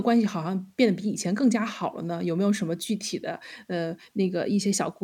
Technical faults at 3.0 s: none

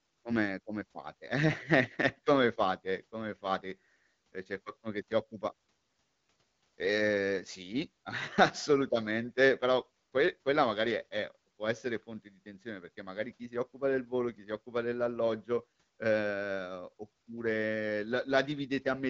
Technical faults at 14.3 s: none

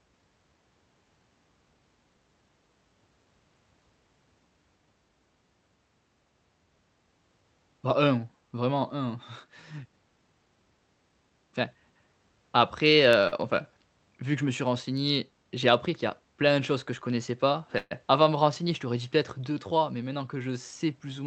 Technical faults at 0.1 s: none

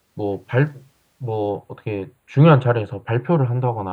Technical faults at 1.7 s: channel delay (comb filtering)

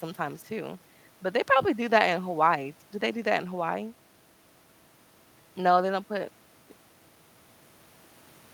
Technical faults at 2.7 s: none

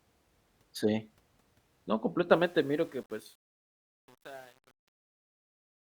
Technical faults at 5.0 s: truncation distortion on a fade

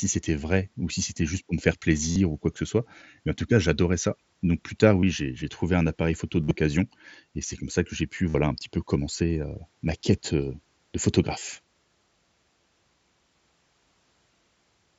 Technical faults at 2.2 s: concealed Bluetooth headset packet loss

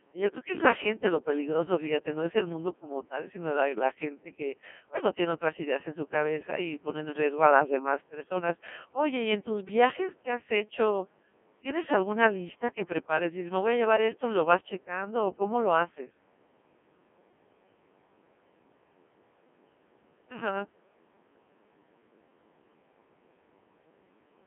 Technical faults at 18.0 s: Codec 2 vocoder

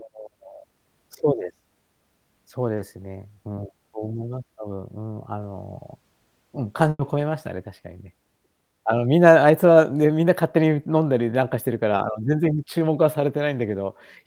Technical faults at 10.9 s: none

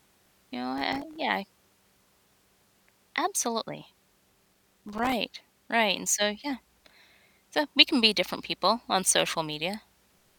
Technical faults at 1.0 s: processor overload crackle

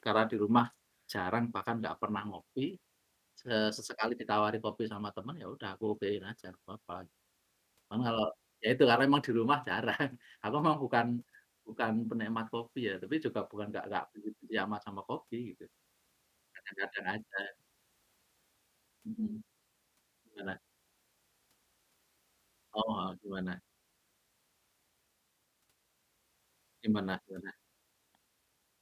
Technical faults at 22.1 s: none

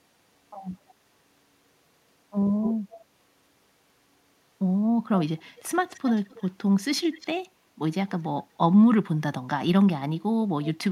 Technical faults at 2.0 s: none

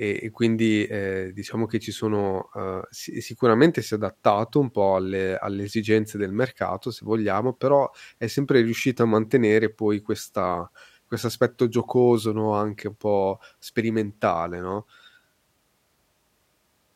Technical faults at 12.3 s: none

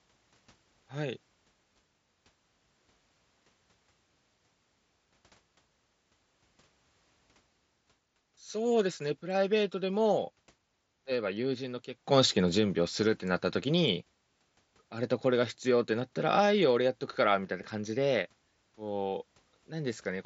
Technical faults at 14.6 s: none

